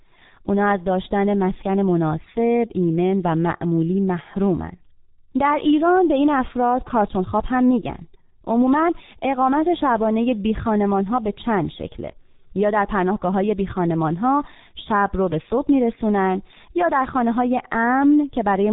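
Throughout the recording, the speech has passed through a G.723.1 codec, a low-rate telephony coder whose heavy damage points to about 6 kbit/s. Nothing above 3.8 kHz survives, and the coarse, slowly updated voice model leaves the voice muffled and hoarse, with smeared consonants.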